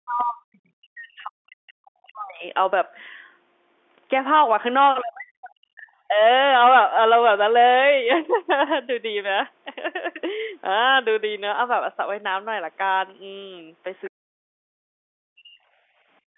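From 0.0 to 2.45 s the talker's level sinks and breaks up in a way that points to speech suppressed in double talk, likely because the far side was speaking at the same moment and the echo canceller turned everything down. The drop reaches roughly 40 dB. On a waveform the envelope collapses to a thin line in patches, and on a spectrogram the harmonics fade, the upper bands going first, across about two seconds of this span.

Inside that stretch, at 1.22 to 1.24 s, comes packet loss with pitch repetition. About 20 ms of audio is missing, which fits a single lost packet, and the receiver fills it by looping the last pitch period. The result is a brief, held, slightly buzzy tone. A spectrogram shows flat, unchanging harmonic lines for that instant, and the waveform shows identical repeated cycles before normal speech cross-fades back in.

At 1.5 to 1.73 s a faint second voice appears, consistent with the other side's voice leaking through, likely residual loudspeaker echo the canceller failed to remove. 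It sits very low, roughly 35 dB under the talker. On a spectrogram it shows as weak, smeared harmonic traces under the main energy. It is barely a bump on the waveform.

Speech suppression returns at 5.01 to 5.88 s, again dipping by roughly 40 dB, and briefly at 6.08 to 6.19 s, where the dip is shallower, around 10 dB. At 14.05 to 14.1 s a short scrap of leaked far-end voice, roughly 30 dB down, is heard. It is immediately followed by a longer suppression from 14.09 to 15.59 s, about a second and a half, with the same hollowed-out spectrogram and collapsing envelope.

Finally, at 15.87 to 16.08 s, the room background is gated by the echo canceller. The room sound drops by about 20 dB for roughly a fifth of a second, then returns once the canceller releases. A spectrogram shows a clean vertical gap in the noise floor, and the waveform shows the low-level noise shrinking by about 20 dB. All of this plays out within the narrow telephone band of the G.711 line.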